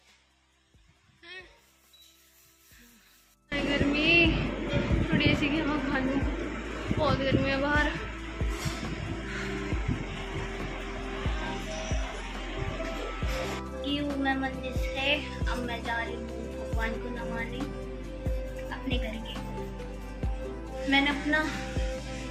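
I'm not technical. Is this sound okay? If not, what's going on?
No. One channel inverted, from the start to about 3.5 seconds: for that stretch the sound drops to a faint shadow of itself, much quieter than what follows. The likely cause is that one of the two stereo channels has been flipped upside down. When both sides are combined into one, as a phone speaker does, the parts they share cancel each other out, leaving only the small differences between them.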